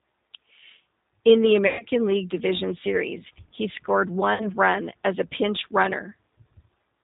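Throughout, the speech carries plainly audible G.729 codec damage at 8 kbit/s. Each 10 ms frame is rebuilt from a vocal tract filter, a pitch predictor and a handful of pulses, so nothing above 4 kHz survives and the voice sounds rough and faintly synthetic.

From 1.67 to 1.86 s, VoIP packet loss concealed by the speech codec replaces about 120 ms of audio, which fits a dozen lost 10 ms frames. The decoder extends its last pitch and filter into a buzzy tone or coloured noise that fades. Between "he scored" and "run as a", from 4.34 to 4.51 s, a shorter 60 ms gap decays the same way before the speech recovers.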